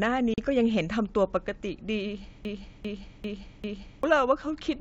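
At 0.34 s a hard-edged gap of about 40 ms cuts in, packet loss on an ADPCM call. Roughly a couple of packets vanish, and the decoder's predictor briefly mistracks, so the sound returns slightly off.

From 2.45 s to 4.03 s comes a broken-record loop. A 0.40 s fragment repeats exactly four times, back to back, likely from a stalled stream resending its last buffer.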